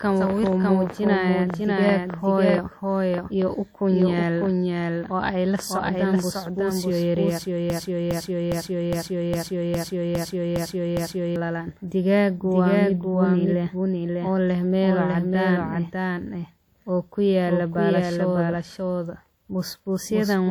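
The clip is speech. A doubled audio track runs through all of it. A second full-band copy trails the original by roughly 0.7 s, at about the same level. It carries no decay or room colour. The likely cause is a second capture by a slower path, or an edit holding two copies out of step. From 7.7 to 11.36 s there is a broken-record loop. A 0.41 s fragment repeats exactly, back to back, nine times. The audio that belonged in that span is gone. The likely cause is a stalled player, encoder or stream resending its last fragment.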